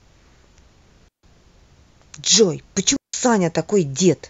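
At 1.08 s and again at 2.96 s the speech drops into near silence for about 150 ms and 170 ms: a digital wireless dropout, where the receiver lost too much data and muted quickly. Each gap is clean, with no noise burst, showing as a flat waveform and a blank vertical band on a spectrogram.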